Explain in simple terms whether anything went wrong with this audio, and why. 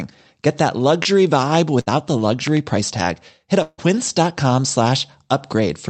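A brief smear at about 1.03 to 1.07 s is short concealed packet loss. Roughly 20 ms of the call arrived too late, so the receiver papered over the hole by stretching the sound just before it and then blended back into the real speech.

From 1.81 to 1.88 s there is a held buzz or fading hiss, then the speech jumps ahead. This is a burst of packet loss: several pieces in a row went missing, about 60 ms of speech in all, and the receiver kept extending the last sound while turning it down.

Between 2.47 and 2.59 s, just before "price tag", two sharp pops land on top of the speech, which carries on underneath. This is a loud pop, likely from a sudden electrical jolt such as a plug, switch or static discharge getting into the signal.

At 3.62 to 3.80 s the sound smears into a fading buzz or hiss, drops briefly to silence, then returns with about 160 ms of speech gone. This is a long network dropout: likely for that stretch no audio arrived, and the receiver could only fill in a fade.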